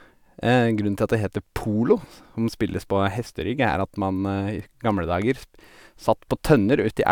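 A speech recording with no technical fault to be heard anywhere in it. Nothing in the audio calls for a time, a value or a cause to be pointed out.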